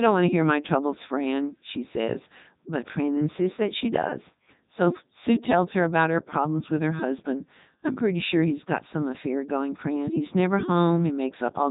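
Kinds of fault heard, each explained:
Codec 2 vocoder: The speech went through a very low-bitrate digital-radio vocoder that discards the waveform and keeps only pitch, voicing, energy and a coarse spectral envelope, which the decoder rebuilds from sine waves. The result is heavily damaged speech that sounds robotic and buzzy, with nothing above 3.9 kHz. That character fits Codec 2 at its 3.2 kbit/s mode, the highest-quality setting of a very limited codec.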